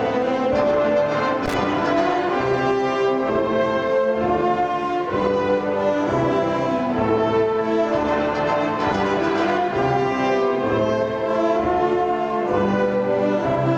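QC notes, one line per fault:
1.46 to 1.54 s, loose connector crackle: a brief, irregular burst of scratchy crackle lasting about 80 ms. A worn or dirty contact in the signal path is making and breaking rapidly, chopping the audio into fragments.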